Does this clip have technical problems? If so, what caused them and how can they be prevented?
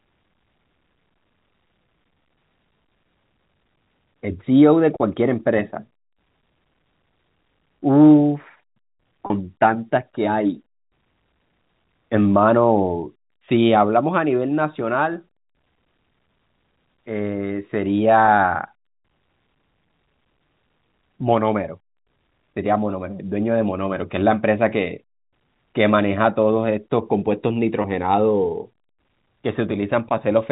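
Yes. Packet loss with pitch repetition occurs at 9.26–9.30 s (40 ms, which fits two lost packets), 18.26–18.28 s and 27.82–27.84 s (20 ms each). Each gap is bridged by repeating the last pitch period. Unlike a plain dropout's silence or click, it is heard as a brief, slightly buzzy hold. Forward error correction, a larger jitter buffer or a less congested network path would prevent it.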